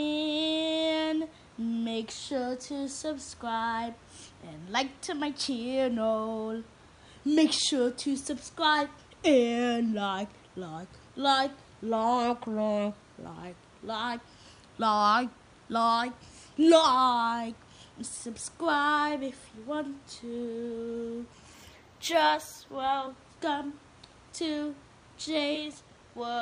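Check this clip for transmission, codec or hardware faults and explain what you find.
One fault turns up, between 21.54 and 23.04 s: a faint metallic shimmer rides on the brightest parts of the sound while the top end goes dull. This is imaging from linear upsampling. The audio was raised from 22 kHz to 44.1 kHz by joining samples with straight lines, a poor interpolation filter. It rolls off the upper band and leaves a mirrored copy of the spectrum between 11.03 kHz and 22.05 kHz, around 30 dB below the signal.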